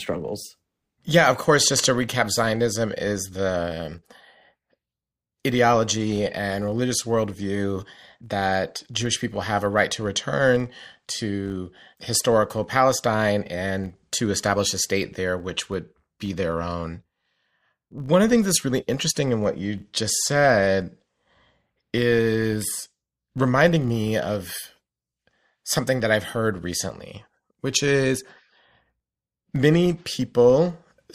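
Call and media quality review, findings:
Filter restarted on every block, whole clip: 50 Hz buzz tracking speech level. Filter state reset each 20 ms block. Spectrogram shows 50 Hz comb lines; waveform shows periodic onset ticks.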